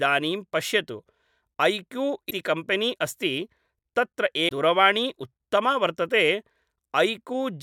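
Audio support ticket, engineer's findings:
Damaged data in a compressed stream, two events in the speech: 2.27 to 2.32 s and 4.45 to 4.51 s, each a short chirp, squawk, click or hole, roughly 50 to 60 ms long. Probable component: the compressed file or transport feeding the decoder. Mechanism: corrupted bytes in those frames, so the decoder misreads them, loses frame sync and hunts for the next valid header before normal output resumes.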